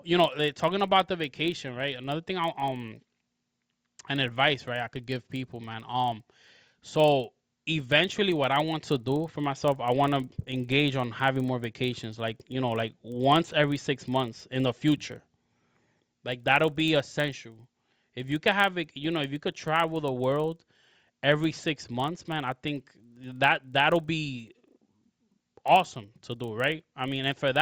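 Throughout, a resampler restarted on every block leaves an error at each 40 ms block edge, heard as a 25 Hz buzz under the speech.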